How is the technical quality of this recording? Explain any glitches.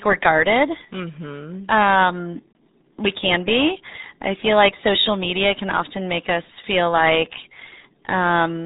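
Poor: the speech runs through the RealAudio 14.4 codec for the whole clip, with heavy damage. Content stops sharply at 3.8 kHz, which fits an 8 kbit/s dial-up codec, leaving muffled, gargly speech. A spectrogram shows an empty band above that flat ceiling.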